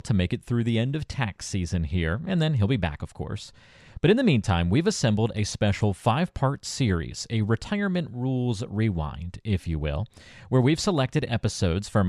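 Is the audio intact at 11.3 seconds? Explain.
Yes, the speech at 11.3 seconds plays through intact, with no fault at that moment.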